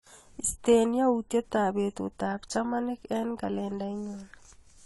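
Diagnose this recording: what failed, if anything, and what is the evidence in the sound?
Codec stage, likely AAC compression: throughout the speech nothing sounds above 11.5 kHz, with smeared, warbly sibilants. This is quantisation damage fitting about 32 kbps, not a clean anti-alias roll-off.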